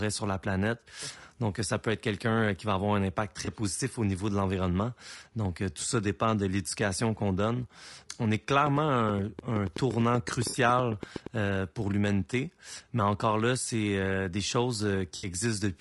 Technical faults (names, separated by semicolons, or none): low-delay AAC compression; AAC frame loss with concealment; train of clicks